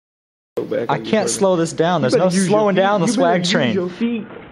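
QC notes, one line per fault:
4.02–4.51 s, Bluetooth SBC bit pool drop: the link apparently congested and the encoder cut its bit pool sharply, to what sounds like roughly 54 kbps, starving the upper sub-bands and coarsely quantising the rest, so the treble dulls and gritty noise rises through the clip's final half-second.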